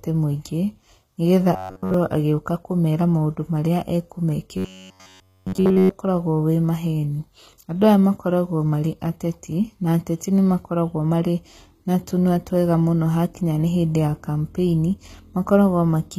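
Throughout, the treble has a gritty, plainly lisping quality on s sounds. This points to a low bitrate near 20 kbps, likely from HE-AAC compression, where the upper band is rebuilt by copying lower bands upward rather than coded directly.

From 1.54 to 1.94 s, and again from 4.57 to 5.93 s, the speech collapses into a rigid metallic buzz at 93.8 Hz. That pitch fits a fragment of roughly 10.7 ms being replayed continuously while the real audio is skipped, which is robotic sound from repeated short buffers.

Between 6.87 and 7.99 s there are five brief ticks, the longest around a millisecond, spaced at a steady rate of a few per second. This pattern matches CD scratch ticks, where the player conceals samples that the error correction could not recover on each disc rotation.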